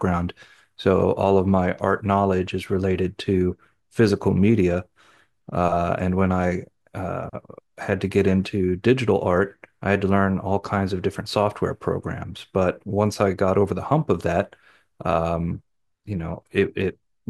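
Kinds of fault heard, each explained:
No faults detected in this speech recording; nothing to report.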